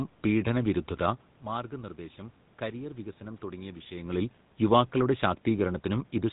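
From the very start of the clip and all the way through, the speech carries the gravelly, buzzy roughness of the GSM full-rate codec, and it's plainly audible. That codec rebuilds the voice from a vocal-tract model driven by a sparse pulse train, which fits a 13 kbps rate, so the voice comes out coarse and grainy. There's also nothing above 4 kHz, which makes it sound dull, and that stays the same when the level dips and swells as the talker shifts around 1 and 4 seconds.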